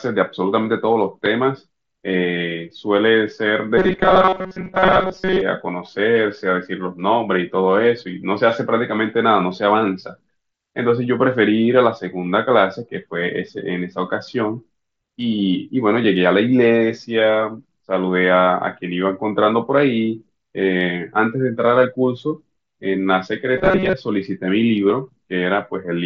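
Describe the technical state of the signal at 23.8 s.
At 23.8 s the speech has a robotic sound from repeated short buffers, spanning 23.57 to 23.93 s. It turns into a rigid metallic buzz at 188 Hz. Late audio was likely covered by looping a 5.3 ms segment.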